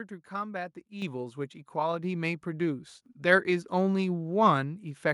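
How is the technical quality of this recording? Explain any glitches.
The recording has one clear glitch. At 1.02 s the microphone volume stepped up: the call software judged the input too quiet and raised the device's input gain in a single jump of about 7 dB. Voice and background noise get louder together at that instant and stay there. On a waveform the envelope widens abruptly at that point. On a spectrogram every frequency band brightens at once, including the noise floor between phrases.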